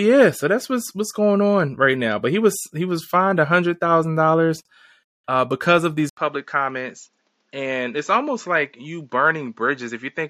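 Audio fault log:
6.09 to 10.29 s, input switched to a poorer device. After an 80 ms gap, speech turns duller, with nothing above 7.6 kHz, and slightly quieter. Likely another microphone.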